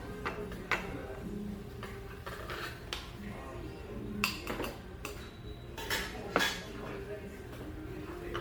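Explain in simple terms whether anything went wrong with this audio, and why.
Generation loss runs through the whole clip. The sound was likely saved as an MP3 around seven times over, and each new copy added fresh small errors. Together they make it swirly, hollow and smeared, with sharp starts blurred.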